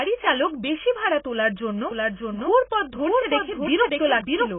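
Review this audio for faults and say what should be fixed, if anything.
The speech is band-limited, with nothing above 3.8 kHz, and heavy codec damage leaves it dull, smeared and warbly throughout. This is likely AAC compression, with the AAC-LC quantiser at a very low rate (the sound fits roughly 16 kbps) discarding the upper spectrum and coarsening what remains. Encode at a higher bitrate or deliver the original uncompressed file.

From 1.91 s, right after "বেশি ভাড়া তোলার জন্য", to the end of the clip, a doubled audio track appears. A full-band second copy, about 5 dB quieter, trails the original by roughly 0.7 s, with no reverberant colouring, and it starts abruptly. The likely cause is a second capture path or an edit stacking two offset copies. Route the source through a single path and check the edit for duplicated regions before export.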